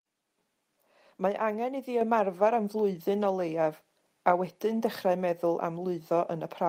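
Microphone volume stepped up at 2.01 s: the software raised the device's input gain by about 4 dB at once, so speech and background jump louder together.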